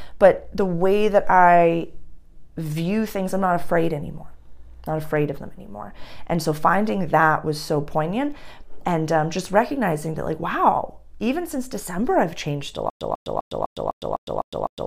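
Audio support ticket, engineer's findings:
Stutter with silent gaps from 12.9 s to end of file. Same 145 ms fragment replays 8 times, each followed by 108 ms digital silence, 253 ms period. Waveform: identical bursts between flat silent gaps. Spectrogram: repeated vertical blocks, blank columns between. Likely cause: stalled player or stream retrying its last buffer, then underrunning. Intended audio lost.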